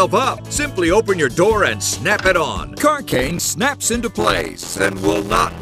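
At 0.37 to 0.40 s, damaged data in a compressed stream corrupts a short run of the encoded file. The decoder cannot read the frames correctly there, loses its place, and has to hunt for the next valid frame header before it can resume. For about 26 ms the sound is broken by a sudden disruption, a chirp, squawk, click or brief hole, before normal decoding picks up again.

From 3.11 to 3.50 s, processor overload crackle appears. The processor keeps missing its deadlines for the small audio buffers, which seem to be around ten milliseconds each, on the order of twenty times across this stretch. Each time a buffer misses its deadline, the output repeats a fragment of old audio with hard edges. Stacked together, those repeats form a burst of gritty crackle laid over the sound, and it ends when the load drops.

From 4.19 s to the end, a block size mismatch (padded) takes over. An upstream stage delivers shorter blocks than the next stage reads, with a 512-sample read block, and the missing part of each block is filled with silence. 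The regular gap in every block produces a buzz at 86.1 Hz. Because only part of each block carries real audio, the sound plays at 0.625 times its proper speed, which points to blocks of about 320 samples being written.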